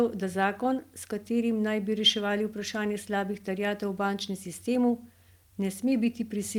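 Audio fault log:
Nothing stood out on listening to this speech recording.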